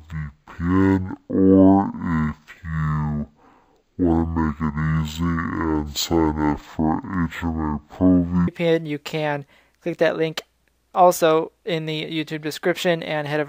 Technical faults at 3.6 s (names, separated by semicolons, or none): stereo read as mono